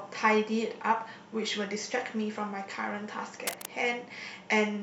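At 3.47 s, a burst of cable scratch noise breaks into the speech and lasts until about 3.69 s. It is a rough, crackling rustle. The bursts are dense and uneven, and they sit only a little below the level of the speech, so they are clearly heard over it. The likely cause is a worn cable, plug or control being moved. Its contact resistance would then jump about quickly and add that ragged noise to the signal.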